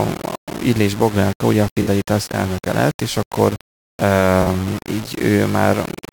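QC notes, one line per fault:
Throughout: low bit depth without dither. The speech carries a coarse, grainy distortion that follows the signal, with the error sitting roughly 15 dB below it. Because the noise tracks the waveform rather than staying as a steady hiss, quiet syllables and decays turn gritty and sputtering. This likely comes from rounding to only about 5 bits with no dither to randomise the error.
1.82–1.87 s and 4.42–4.47 s: AAC frame loss with concealment. The first gap falls after "ugye a" and before "elnöke lett és akkor". Each gap lasts about 43 ms, which fits two lost frames. The decoder patched each hole from the last good spectrum, so instead of a click or dropout there is a brief smeared, noisy or phasey blur before clean decoding resumes.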